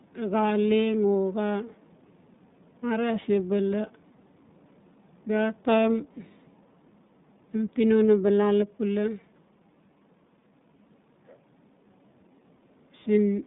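Throughout the speech, the iLBC codec limits the band to roughly 150 Hz to 3.7 kHz, with nothing above 3.8 kHz. Each 20 ms frame is coded on its own, which fits the 15.2 kbps mode. The damage is plainly audible: thin, slightly rough, synthetic-sounding speech.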